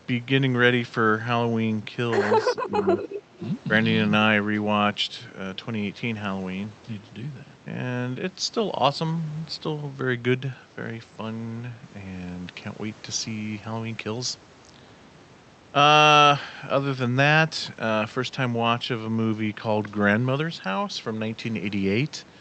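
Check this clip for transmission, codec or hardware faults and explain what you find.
Two faults turn up close together near the start, both pointing to echo cancellation on a loudspeaker end of a call; the audio itself is carried with an Opus-style band limit around 8 kHz.

Speech suppressed in double talk, 2.47 to 2.98 s. When both ends talked at once, the echo canceller likely could not tell the near talker from loudspeaker echo and pulled the whole signal down. The speech sinks by as much as about 15 dB, dipping for roughly 0.4 s of that stretch.

Echo leak, 2.98 to 3.21 s and again at 3.44 to 3.48 s. The canceller likely left part of the loudspeaker sound in the microphone signal, so it was sent back as a copy trailing the original by 348 ms. The first scrap sits about 10 dB below the speech. The second is a brief flicker about 20 dB down.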